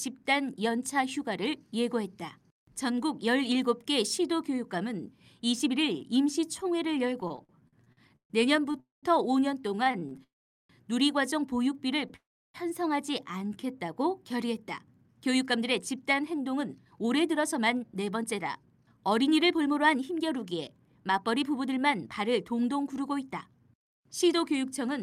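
Repeated stalls (stutter) run from 7.21 to 10.21 s: 18 gaps, the longest 138 ms, are filled by held-over sound as late packets starve the jitter buffer, so the speech drags and stutters. Call audio freezes at 8.80–9.06 s, 10.24–10.72 s and 12.16–12.57 s stretch the last sound, then fall silent for about 0.17, 0.41 and 0.33 s before resuming where they stopped. Packets held up in transit likely emptied the buffer. A short stall from a late packet at 12.08–12.13 s holds a sound 21 ms too long while the receiver waits. Jitter buffer slow-down at 13.25–13.61 s repeats pitch periods, adding 65 ms and playing at 84% speed at unchanged pitch. Jitter buffer speed-up from 14.98 to 24.99 s trims pitch periods to shed excess delay, playing at 109% speed and removing roughly a second.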